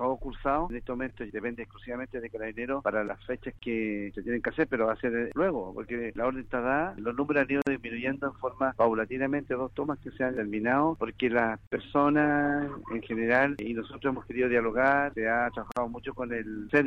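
Gaps at joins of encoded pieces open in the continuous audio at 3.59 to 3.62 s, 7.62 to 7.67 s, 11.67 to 11.72 s and 15.72 to 15.77 s, recurring every 4.0 s. The first gap lasts about 31 ms and the others 49 ms each. The audio was encoded in separate pieces and joined without trimming, so each piece's encoder start-up delay and padded final frame remain as short silences with smeared edges, after which the sound resumes where it stopped.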